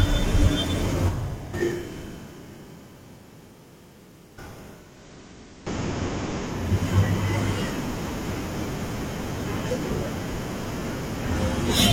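At 4.68 s the speech shows a classic case of digital radio blending to analogue. The receiver loses its digital stream and cross-fades, over about 410 ms, to the station's FM signal. You hear a faint hiss sitting well under the speech, and a level shift of about 1 dB. At 6.79 s it blends back to digital.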